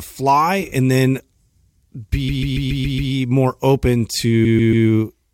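Repeated frames: a 139 ms block, which fits about six compressed frames, was sent again and again, so the speech stutters, replaying six extra times from 2.28 to 3.11 s and three times from 4.44 to 4.86 s, adding 0.84 s and 0.42 s.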